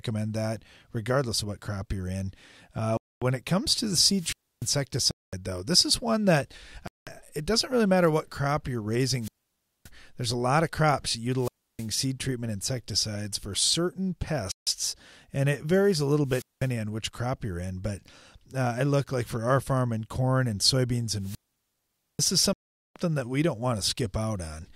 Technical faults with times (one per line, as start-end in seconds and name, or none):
2.97-3.22 Bluetooth stall
4.15-4.74 wireless microphone squelch dropout
5.11-5.33 Bluetooth stall
6.87-7.07 Bluetooth stall
9.20-9.90 wireless microphone squelch dropout
11.37-11.89 wireless microphone squelch dropout
14.52-14.67 Bluetooth stall
16.25-16.70 wireless microphone squelch dropout
21.19-22.32 wireless microphone squelch dropout
22.53-22.96 Bluetooth stall